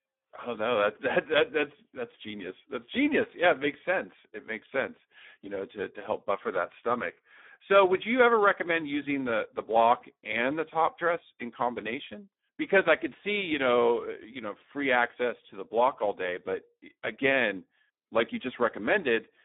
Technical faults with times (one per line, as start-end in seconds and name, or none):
0.00-19.44 Speex codec